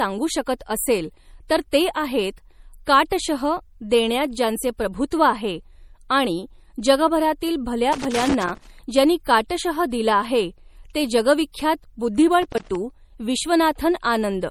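Throughout the speech, the upper spectrum stops dead at about 18.1 kHz, and the smeared, slightly watery texture of a heavily compressed MP3 sits under every syllable. This is likely low-bitrate audio saved at a high bitrate: the artefacts point to an MP3 around 48 kbit/s later re-encoded at something like 256 kbit/s. The larger second file cannot bring back what the first encode discarded. On a spectrogram this shows as a flat ceiling with blotchy, holed-out high bands.

From 7.93 to 8.70 s, just after "जगभरातील भल्या" and before "ज्यांनी काटशह दिला आहे", an irregular burst of scratchy crackle breaks in, and a shorter one follows from 12.43 to 12.75 s. This is loose connector crackle, where a worn or dirty contact rapidly makes and breaks, chopping the signal. In the waveform it looks like ragged dropouts and sharp spikes, and on a spectrogram like scattered full-band vertical streaks.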